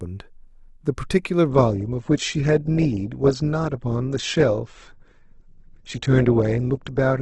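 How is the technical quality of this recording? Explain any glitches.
The recording starts clean but degrades partway through. At 1.48 s, and lasting to the end, it shifts to an adaptive stream at a lower bitrate. When the connection slows, the player switches to a leaner encoding. Here the drop sounds like a move from roughly 64 kbit/s Opus to about 12 kbit/s. The treble vanishes above 8.3 kHz, and the speech takes on a thinner, artefact-laden quality. Unlike a dropout or buffering stall, the change is abrupt yet seamless, with no gap or skipped audio.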